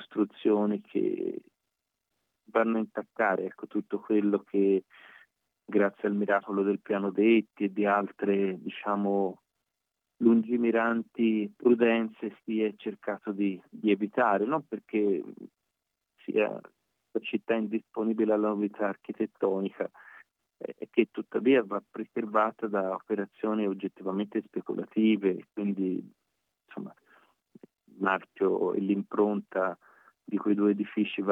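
No technical faults are audible.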